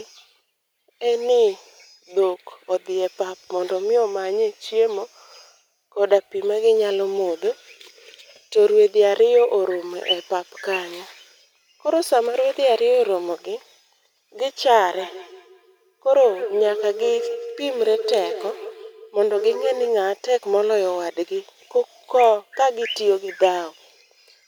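From 14.99 to 19.93 s, each stretch of speech comes back as a hollow, ringing repeat roughly a fifth of a second later, the loudest repeat sitting about 10 dB below the direct voice. This is feedback echo between two devices: a second device in the same room is playing the call aloud, and the first microphone picks that playback up and sends it round again. Its own echo canceller can't remove sound it didn't play.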